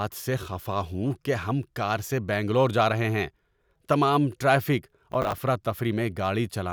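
Right after "تمام ٹریفک", from 5.12 to 5.38 s, there's processor overload crackle: around ten buffers of roughly 10 ms miss their deadlines, replaying stale audio as gritty tearing.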